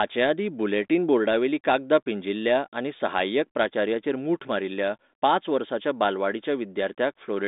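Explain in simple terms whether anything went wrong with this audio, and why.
Nothing went wrong: the speech has passed through an ordinary telephone-style digital line that carries sound only up to about 3.8 kHz, which gives it a narrow, phone-like tone, and the line's compression leaves at most a faint trace.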